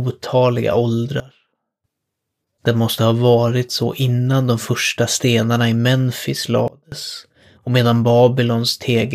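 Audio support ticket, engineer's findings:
Sudden gain jump at 1.2–1.84 s (about 18 dB down) and 6.68–6.92 s (about 24 dB down). Speech and noise floor drop and return together. Waveform shows vertical envelope steps; spectrogram shows uniform darkening across all bands. Likely an unramped gain change or bit shift.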